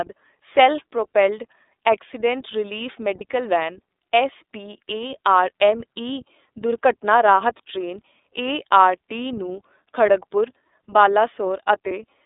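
Speech squeezed through the iLBC codec, with the band held to roughly 300 Hz to 3.7 kHz and a slightly rough, synthetic edge that fits the 13.33 kbps mode with 30 ms frames. You'll also hear lost iLBC frames at 3.18 to 3.22 s, right after "ਸੈਲਫ ਪ੍ਰੋਪੇਲਡ ਐਕਸੀਡੇਂਟ ਰਿਲੀਫ", and again at 11.88 to 11.91 s. Each gap is filled with a brief buzzy, held vowel made from a repeated pitch cycle, about the length of a single 30 ms frame, and the voice recovers immediately afterwards.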